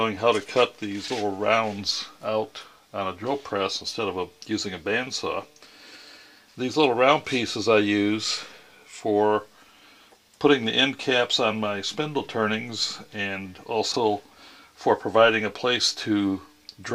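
At 1.04 to 1.10 s, and again at 13.92 to 13.96 s, there are chunks out of order. In each case a 20 ms block of audio was delivered late and plays after material that should follow it: two chunks late in the first event, one in the second. Nothing is missing, but the sequence is scrambled and creates three hard joins, heard as a brief garbled, jumbled moment in the sound.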